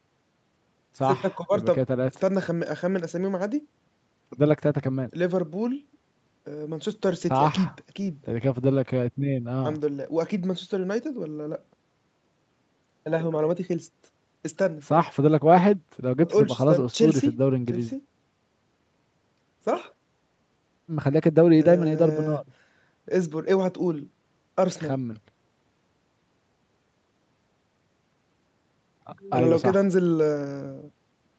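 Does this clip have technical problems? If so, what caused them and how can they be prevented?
No, nothing stood out on listening to this speech clip, which has the expected band-limited sound of a call, with nothing above about 8 kHz.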